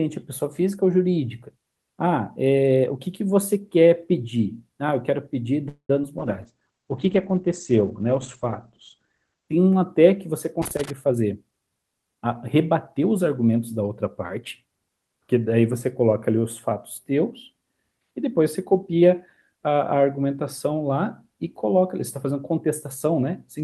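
At 5.68 s the sound stalls for about 0.21 s, which is a call audio freeze, most likely packets held up in transit so the jitter buffer ran dry. The receiver stretches the last sound into a fading buzz or hiss that drops to silence for roughly 90 ms, then resumes right where it stopped, so nothing's lost, just a gap inserted.

Right after, around 6.02 to 6.04 s, there's a short concealed packet loss. About 10 ms never reached the decoder in time, and the receiver papered over it by extending the previous sound and blending back in. You hear it as a tiny smear or wobble.

From 6.19 s to 9.55 s comes a call bitrate drop. The encoder went from 48 kbps down to 15 kbps, sitting at the bottom for about 3.3 s, and the bandwidth shrank from 20 kHz to 8 kHz. The sound goes coarse and muffled, with that watery low-rate Opus texture, until it climbs back.

Between 10.62 s and 10.90 s there's loose connector crackle, a worn or dirty contact making and breaking as it moves. 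It chops the signal into an irregular burst of scratchy crackle.

Then from 11.06 s to 12.26 s a jitter buffer speed-up kicks in. The buffer was holding too much, so the receiver trimmed out short pitch-period slices, around a fifth of a second in total. Playback runs at about 117% speed with unchanged pitch and sounds noticeably hurried.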